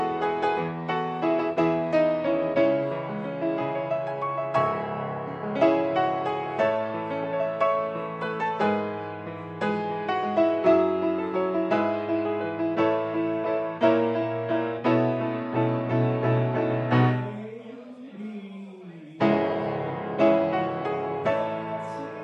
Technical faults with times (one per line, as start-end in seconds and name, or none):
none